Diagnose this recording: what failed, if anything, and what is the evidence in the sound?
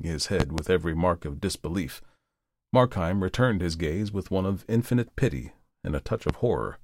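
A loud pop, likely a voltage transient in the analogue wiring, strikes twice at 0.40–0.62 s, before "every mark of disbelief", and once at 6.29–6.33 s. Each spikes roughly 20 dB over the speech, a sharp waveform spike and full-height spectrogram stripe, with speech continuing underneath.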